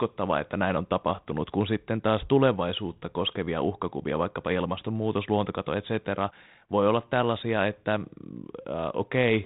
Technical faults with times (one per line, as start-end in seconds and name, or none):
none